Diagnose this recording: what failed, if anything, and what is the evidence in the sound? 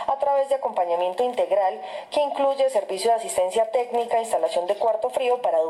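No fault found in this recording.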